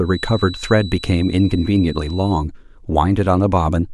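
From the start to 2.47 s, a thin feedback whistle sits behind the speech at 4 kHz, roughly 20 dB below it. It holds steady and swells and fades slowly in level. The likely cause is a loudspeaker-to-microphone loop hovering just at the edge of feedback.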